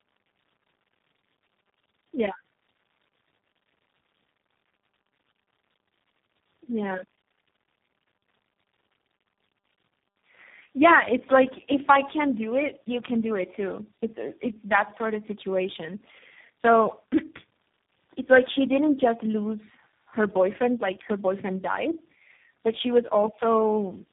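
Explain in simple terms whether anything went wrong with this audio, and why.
The speech has a fault called tandem speech coding, present from start to finish. It sounds rough, muffled and warbly, with nothing above about 3.8 kHz. That points to several phone speech codecs in a row, each re-squeezing the last one's damaged output.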